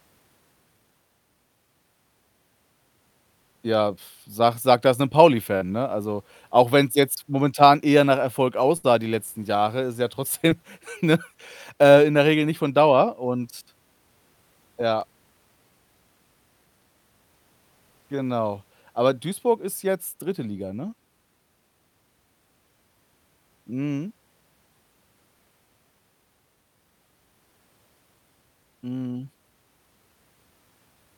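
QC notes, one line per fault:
5.57–5.63 s, short concealed packet loss: about 40 ms of speech never arrived in time, and the receiver covered it with 36 ms built from the preceding sound before blending back. It is heard as a brief smear or wobble, with no fade, unlike a burst.
8.77–8.85 s, burst of packet loss: about 60 ms went missing in a row. The receiver stretched the last sound across 63 ms while turning it down, so a held buzz or fading hiss is heard. Speech then resumes further on, with that stretch gone rather than smoothed over.
10.49–10.53 s, short concealed packet loss: only about 20 ms was lost, filled with 12 ms extrapolated from the sound just before. The result is a tiny wobble or smear that is shorter than the 5.57 s event, with no decaying tail.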